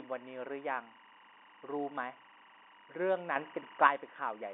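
All the way through, a timecode bleed chirps underneath the telephone-band speech: a square-wave warble flipping around 1 and 2 kHz, roughly 25 dB down, consistent with 23.976-frame code leaking in. At 3.36 s there's a sudden gain jump of 6 dB that snaps back at 3.87 s, lifting speech and noise together, likely a gain setting switched without a ramp.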